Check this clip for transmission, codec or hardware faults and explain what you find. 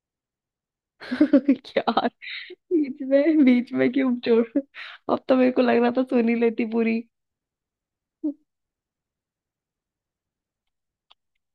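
No transmission, codec or hardware faults are audible.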